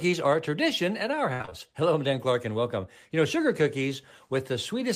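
From 1.33 to 1.53 s the speech breaks into repeated packet loss, giving a robotic sound: four short dropouts, the longest 62 ms, each patched by stretching the previous sound. That fill covers about 60% of the span. On a spectrogram, smeared, repeated frames interrupt the harmonics.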